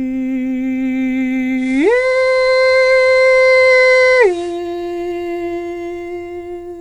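A music recording where, from 1.55 s to 4.61 s, hiss rises to around 30 dB below the music, and the level shifts by about 1 dB: digital radio blending to analogue FM, with 158 ms cross-fades in and out.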